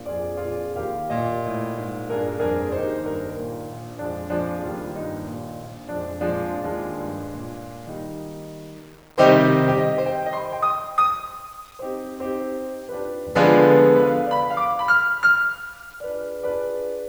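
Low bit depth without dither runs through the whole music clip, from start to finish. A grainy, gritty distortion rides on the music and changes with it, roughest in quiet passages and fading tails, where low-level detail breaks up or sputters. The error sits roughly 30 dB below the music. The likely cause is samples rounded to a coarse grid, consistent with 8-bit resolution, with no dither to decorrelate the error from the signal.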